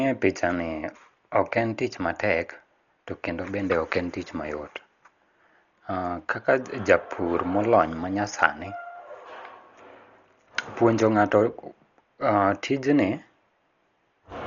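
From start to finish the speech sounds dull and muffled, with nothing above 6.9 kHz and a rough, fluttering noise around tones. This heavy damage is likely Dolby Digital compression at a starved bitrate, near 40 kbps, with dither noise filling empty frequency lines.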